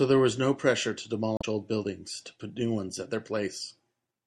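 From the start, the speech sounds watery and swirly, with dull treble. This is MP3 compression, likely encoded at a low bitrate near 64 kbps. From 1.36 to 1.44 s, damaged data in the compressed stream throws the decoder off its frames. It produces a brief glitch.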